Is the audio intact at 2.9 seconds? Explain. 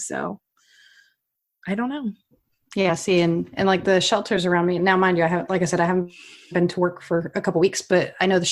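No. At 2.9 s the speech jumps forward: compressed frames skipped, dropping about 40 ms as a few 10 ms frames never played.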